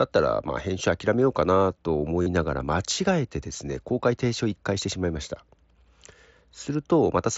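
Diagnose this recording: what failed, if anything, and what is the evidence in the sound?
Concealed Bluetooth headset packet loss on the radio link, at 0.48 s, 2.22 to 2.27 s and 3.54 s. The single 7.5 ms gaps are nearly hidden. The 37.5 ms run is patched by repeating recent speech, heard as a held buzzy tone with a slight warble as real speech returns.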